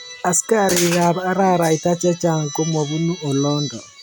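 No technical faults can be heard in this recording.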